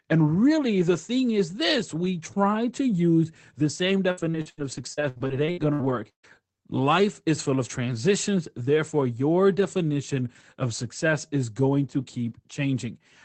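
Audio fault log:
4.11–6.25 s, repeated packet loss (robotic sound): after "to use the same", 13 gaps up to 138 ms are filled by continuing the previous sound, so the audio turns choppy and robotic.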